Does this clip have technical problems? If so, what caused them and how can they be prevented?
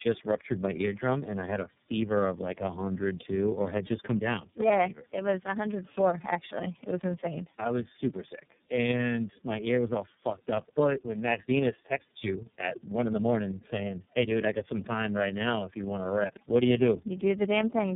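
Yes. Tandem speech coding runs through the whole clip: the speech passed through three speech codecs in a row, which points to an AMR-NB 4.75 kbit/s leg followed by two iLBC 13.33 kbit/s legs, with G.711 A-law between them. Each coder re-encoded the previous one's damage, so the audio is rougher, more muffled and more warbly than any single low-bitrate codec would leave it. Nothing is present above 3.7 kHz. A single codec would sound cleaner at the same bandwidth, and that stacked, compounded smearing is what marks this as tandem coding. To prevent it, negotiate one codec end to end or use transcoder-free operation, so that the speech is encoded only once.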